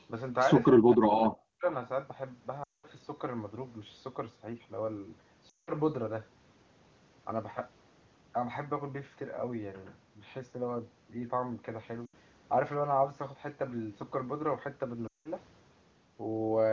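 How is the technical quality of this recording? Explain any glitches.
The recording has two kinds of glitch: one stretch where the speech is pushed down, and four short spots where it drops out. The wideband call bandwidth, reaching close to 7 kHz, fits the top AMR-WB rate.

From 0.8 to 1.65 s the speech is likely suppressed in double talk. The echo canceller appears to mistake the near talker for loudspeaker echo, so it attenuates in pieces, by up to about 40 dB, for around 0.7 s in total.

Lost AMR speech frames occur at 2.63–2.86 s (200 ms), 5.49–5.71 s (180 ms), 12.05–12.14 s (80 ms) and 15.07–15.30 s (180 ms). The decoder repeats the last good pitch and vocal tract settings at falling gain, so the sound drops to near silence within two frames, and the voice comes back weak or rough for a moment. That quick drop sets it apart from the choppy double-talk cuts.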